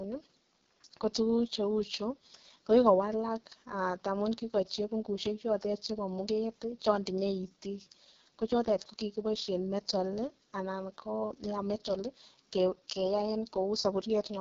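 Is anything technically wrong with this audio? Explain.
Yes, it's been through the AMR wideband (HD Voice) codec at its lowest 6.6 kbit/s rate for the whole clip. The speech model is starved, so voices turn rough and raspy, with nothing above about 7.5 kHz.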